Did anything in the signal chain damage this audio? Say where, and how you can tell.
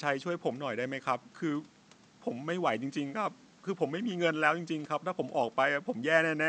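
No, nothing damaged this audio.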